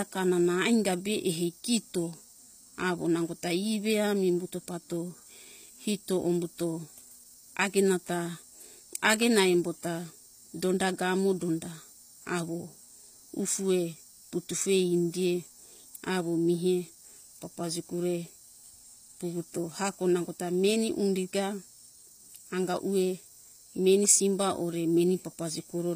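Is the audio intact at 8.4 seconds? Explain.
No. At 8.4 seconds, as throughout the whole clip, the speech shows plainly audible damage that sounds like HE-AAC compression at a low bitrate, consistent with roughly 24 kbps. Only the lower spectrum seems to be coded directly. The treble is rebuilt by copying lower bands upward under a coarse envelope, so its harmonics misalign with the real ones. Sibilants come out gritty and metallic, and nothing is present above 15.5 kHz.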